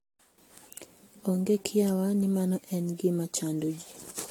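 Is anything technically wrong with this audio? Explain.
Yes. Throughout the speech the sound is swirly, smeared and hollow, with blurred attacks and nothing above 19.2 kHz. This is likely generation loss. It fits about seven rounds of AAC-LC coding near 96 to 111 kbit/s, each requantising on a shifted frame grid, so noise and spectral holes pile up.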